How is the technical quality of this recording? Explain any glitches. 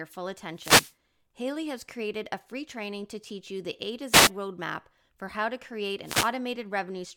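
The speech is interrupted three times by wireless microphone noise hits, at 0.53–0.94 s, 4.10–4.31 s and 6.03–6.32 s. Each is a brief swish of static over the voice, lasting between about 0.2 and 0.4 s. The analogue FM radio link fades as reflected signals cancel, and the receiver's own noise rises into the gap. Unlike a digital dropout, the sound hisses instead of going silent, and it comes and goes with the fade instead of staying as a steady hiss.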